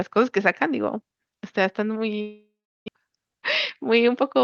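A long network dropout from 2.21 to 2.90 s interrupts this speech recording over a call path whose 12 kHz top end fits Opus. The likely cause is that no audio arrived for about 0.6 s. The receiver stretched the last sound into a fading buzz, then left roughly 0.36 s of near-silence before the audio resumed with that stretch gone. Playback came back about 50 ms later than before. A jitter buffer speed-up follows from 3.82 to 4.38 s. The receiver, holding more audio than its target, trimmed short pitch-period pieces repeatedly, around 40 ms in total. The speech runs about 5% fast at unchanged pitch and sounds slightly hurried.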